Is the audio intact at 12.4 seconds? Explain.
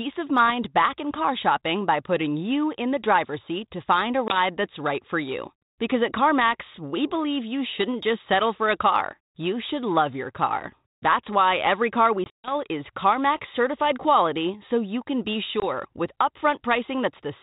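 No. Packet loss on an ADPCM call hits 12.24 to 12.53 s. About 160 ms is replaced by silence in hard-edged gaps, the longest 140 ms. The 32 kbit/s G.726 decoder's predictor loses step, so the speech returns distorted until it resettles.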